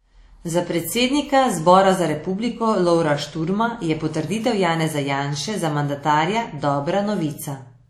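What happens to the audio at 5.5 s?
At 5.5 s the speech carries the same ringing, washy texture heard across the whole clip, likely from WMA compression at a bitrate that fits roughly 48 kbps. Long transform blocks smear quantisation noise over tens of milliseconds, nothing survives above 15.8 kHz, and the hiss breathes with the signal rather than staying constant as plain background noise would.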